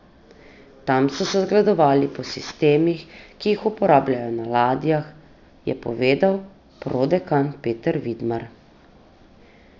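A speech recording with aliasing running through the whole clip. The content sits hard up against a ceiling near 6 kHz, which suggests a downsample to about 12 kHz without an anti-aliasing filter. Sibilant energy that belonged above that edge has folded back down into the band at wrong, unrelated frequencies, about 25 dB below the speech. That gives the s and sh sounds a gritty, metallic edge.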